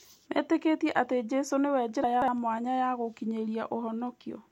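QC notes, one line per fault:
2.04–2.28 s, chunks out of order: just before "mwanya ya", a 60 ms slice of the speech plays three slices too late, after audio that should have come after it, so about 0.24 s sounds jumbled, with three hard joins. Unlike a dropout or skip, nothing is missing or silent. Every fragment is heard, only in the wrong order, and unlike a stutter nothing repeats.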